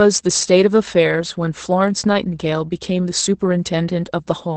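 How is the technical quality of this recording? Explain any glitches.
Technical quality is mediocre. All the way through, Opus voice compression is plainly audible. The SILK coder's wideband mode cuts everything above 8.5 kHz and codes the excitation coarsely, which fits a bitrate around 12 kbps. That leaves the speech muffled, a bit hoarse and slightly robotic.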